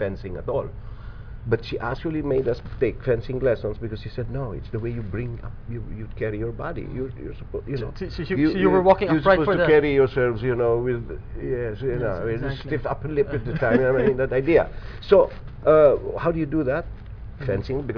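No technical faults can be heard anywhere in the audio.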